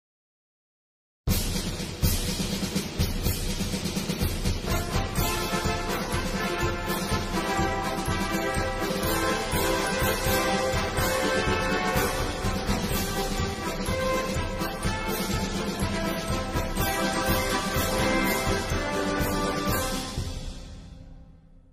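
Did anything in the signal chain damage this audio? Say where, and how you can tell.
No, nothing in the chain seems to have harmed this audio, so there's no stage to point to and nothing to explain.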